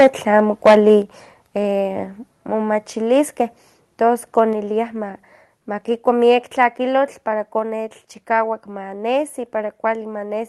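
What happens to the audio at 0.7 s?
Microphone overload hits from 0.39 to 0.88 s, so 0.7 s falls in the middle of it. The loudest syllables are flattened at the converter's ceiling, with peaks pushed about 8 dB past full scale and a few percent of samples squared off. The likely cause is input gain set too high at the microphone. Cutting the tops off the waveform adds a harsh, crackling edge that rides on the speech.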